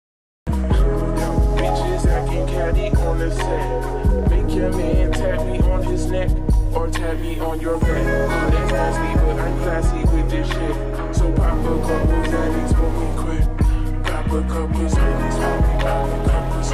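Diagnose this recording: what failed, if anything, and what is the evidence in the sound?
A cut-off start at 0.47 s. The file opens with digital silence from 0.0 to 0.47 s, and then the sound appears already in progress, with no natural attack or fade-in. The failure sits at the capture start, in the recording or streaming stage: writing began late, after the source was already sounding, so the opening of that sound was never captured and the waveform jumps abruptly from zero into the middle of it.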